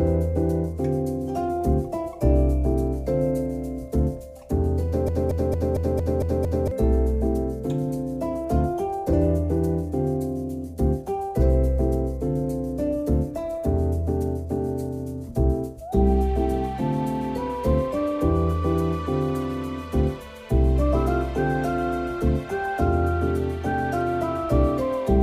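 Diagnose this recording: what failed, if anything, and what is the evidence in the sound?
From 5.09 s to 6.71 s, a short slice of sound, about 0.23 s long, plays seven times in a row with no variation, like a broken-record loop, before the recording picks up again. The exact sameness of each pass and the back-to-back repeats point to the playback or streaming stage. The player or stream likely stalled and kept re-sending the last fragment it held, so the material that belonged in those 1.6 seconds is missing.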